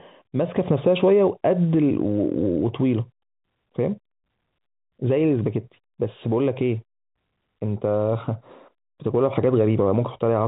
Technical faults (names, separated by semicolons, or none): none